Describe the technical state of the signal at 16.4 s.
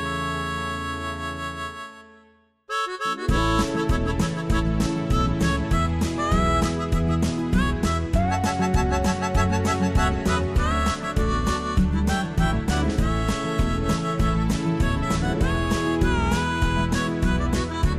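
At 16.4 s the signal is intact, with no dropout, distortion, glitch or other technical fault to be heard at that point.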